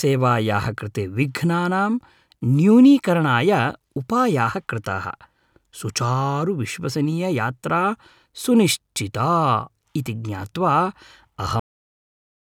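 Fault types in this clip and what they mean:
Cut-off end: at 11.60 s the speech stops mid-sound and drops straight to digital silence, with no decay or fade like a natural ending.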